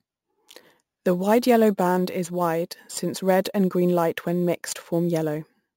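Imaging from sample-and-hold upsampling runs throughout: repeated, unsmoothed samples, consistent with a 16 kHz source, mirror the speech into 8 to 16 kHz as metallic fizz about 22 dB down.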